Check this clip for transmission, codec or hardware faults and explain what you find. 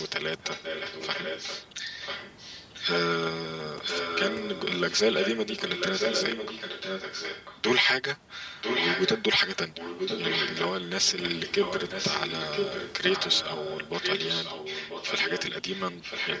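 Two faults are audible: comb filtering from a channel delay across the whole clip, and an echo leak that returns the speech just under a second later in six stretches.

The channel delay is present from start to finish. One channel lags the other by about 5 ms, and when the two are summed to mono, the shared signal cancels at a first notch around 100 Hz and then at odd multiples spaced roughly 200 Hz apart. The speech sounds hollow and phasey. On a spectrogram this appears as fixed, evenly spaced dark horizontal stripes running the full length, above a band that stops at 8 kHz.

The echo leak occurs at 0.0–0.1, 0.41–1.68, 2.01–2.84, 3.81–7.61, 8.61–10.88 and 11.2–16.4 s. A copy of the speech returns 992 ms late, most likely because the far end plays the call on a loudspeaker and its echo canceller let part of the microphone pickup through. The copy ranges from about 15 dB below the speech to nearly as loud, and it is strongest at 8.61–10.88 s. 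On a spectrogram and waveform it shows up as a duplicate of the syllables, shifted about one second right.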